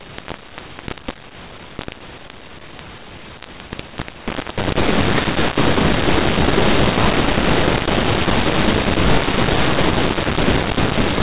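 From start to finish, a mu-law and A-law mix-up is heard: A-law samples are decoded as mu-law, which scrambles levels so the speech turns harsh and gritty and the pauses fill with hiss. Ordinary G.711 quantisation noise stays faint beneath the signal, but this distortion never falls silent.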